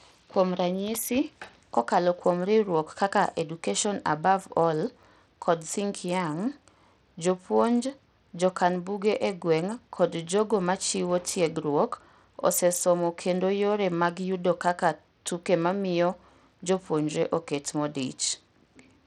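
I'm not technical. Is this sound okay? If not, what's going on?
No. Throughout this speech there is a fault consistent with Bluetooth SBC compression, the basic codec wireless earphones and speakers use. It likely came from the audio passing over a Bluetooth link at a low quality setting. The codec splits the sound into frequency bands and gives the highest ones too little data, so the crisp top end comes and goes, and a gritty, metallic roughness sits on the voice from start to finish.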